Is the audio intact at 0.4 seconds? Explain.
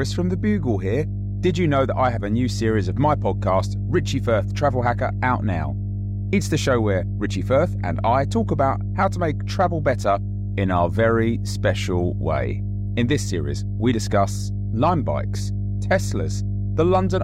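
No. A ground loop or nearby transformer is coupling the 50 Hz power line into the signal, and this mains hum runs through the whole clip, including 0.4 s. It sounds like a steady low drone with low harmonics, sitting only slightly below the speech in level.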